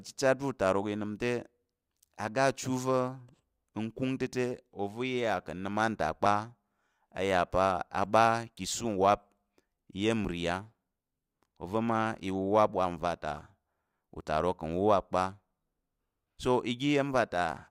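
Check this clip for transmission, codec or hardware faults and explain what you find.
One fault, overlap between stream segments, occurs at 4.27, 6.26, 10.25 and 14.21 s in this speech. Where two-second segments' timestamps overlap, the player discards a few milliseconds of real audio, causing brief clicks or skips. Unlike packet-loss dropouts, nothing goes silent; the waveform simply jumps forward.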